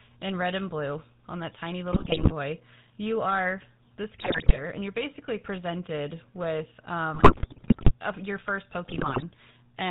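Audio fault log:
throughout: GSM full-rate codec. The speech has a steady buzzy, gravelly grain and nothing above 4 kHz, which fits the 13 kbps full-rate coder. It models the vocal tract as a filter and excites it with a sparse, regularly spaced pulse train, so the roughness is constant and tied to the pitch rather than arriving in bursts. That steadiness is what separates it from the bit-error damage.
1.92–2.32 s, 4.18–4.60 s, 7.14–7.93 s, 8.84–9.23 s: GSM bit errors. Short bursts of squawking, popping and gargling break up the speech. The second burst falls between "you are this" and "and you're basically presented", the third between "you're basically presented with" and "a your first", and the last just after "a your first". Corrupted filter, pitch and gain values warp the spectrum or spike the level frame by frame, which fits an error rate of around 4 to 7 percent. The third burst is the longest.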